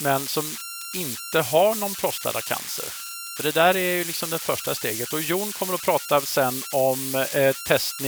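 Converter idle tones run through the whole recording. A whistle sits around 1.5 kHz, clearest in the pauses between phrases. Under quieter speech it turns into a grainy, buzzy texture. The error sits only about 8 dB below the speech, so it is hard to miss. A delta-sigma converter without dither, fed a very small input, settles into repeating bit patterns. Those patterns produce tones. Their pitch follows the input's offset.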